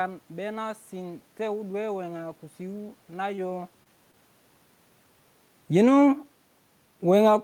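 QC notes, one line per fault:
3.35–3.39 s, 3.83–3.87 s and 4.11–4.15 s, short concealed packet loss: about 20 ms of the call arrived too late or not at all each time, and the receiver's decoder covered each hole by extending the preceding sound, carrying its pitch through voiced stretches or substituting shaped noise in unvoiced ones, before crossfading back to the real signal. Each repair is a brief smear or wobble in the speech, and a short consonant can drop out. These sit near a natural level shift around 3.5 s, where the talker moves relative to the microphone.
5.62 s to the end, automatic gain falling: the automatic gain control judged the input too loud or its background noise too strong and pulled its gain down progressively over the last stretch of the clip. Because the gain applies to everything the microphone picks up, the speech and the room noise behind it sink together rather than the talker alone getting quieter. 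That shared fall in level separates this fault from a talker simply leaning away from the microphone.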